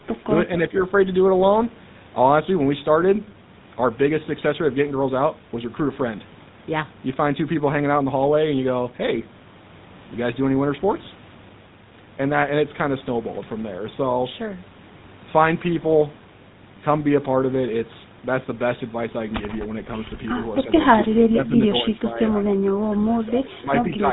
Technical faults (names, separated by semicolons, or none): GSM full-rate codec; speech suppressed in double talk